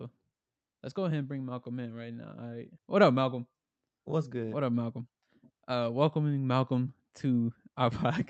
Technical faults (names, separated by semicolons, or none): none